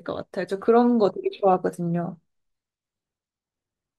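Nothing technical goes wrong anywhere in this bit of speech, so there's no fault to point to at any moment.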